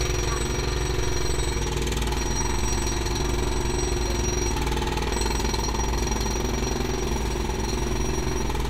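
From 7.04 s to the end at 8.69 s, a crude rate conversion takes hold. The sound picks up a gritty, inharmonic fizz that rides on its louder and brighter parts. The pattern points to a step from 44.1 kHz up to 48 kHz done by simply repeating the nearest sample, with no filtering. That repeating error creates shifted, inharmonic copies of the sound itself. The fizz sits roughly 25 dB below the signal.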